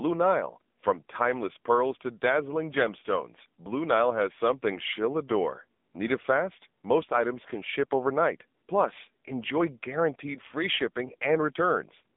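From start to finish the speech sounds buzzy, thin and synthetic, with nothing above about 3.7 kHz and the lows cut below roughly 200 Hz, leaving a narrow 200 Hz to 3.6 kHz phone-line band. This is the AMR narrowband mobile codec at work. It rebuilds the voice from a vocal-tract model fed by a few pulses per 5 ms. The heavy coding damage fits a low rate of around 6.7 kbps.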